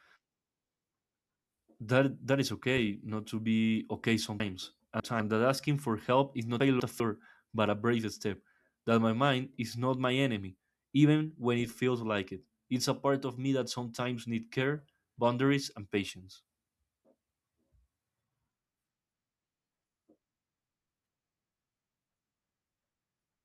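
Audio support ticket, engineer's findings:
Chunks out of order in the speech at 4.4–5.2 s (after "not to be okay") and 6.6–7.0 s (before "but a brave step"). Jumbled bits. A 200 ms chunk lands three slots late, then one slot late. Likely buffer/write ordering.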